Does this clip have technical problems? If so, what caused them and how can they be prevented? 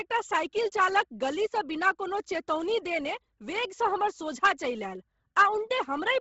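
Yes. Bluetooth LC3 compression runs throughout: the speech stops at 7.7 kHz and sounds breathy and grainy, likely from noise-filled upper bands at a bitrate near 16 kbps. To prevent it, record locally or over a wired link, or raise the LC3 bitrate.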